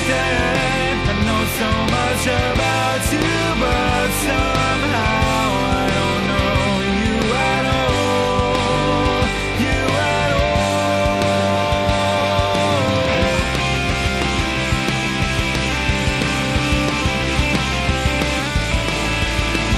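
No technical faults can be heard anywhere in the signal.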